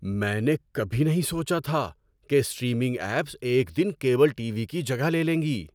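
Nothing stood out as a technical fault anywhere in this stretch of speech.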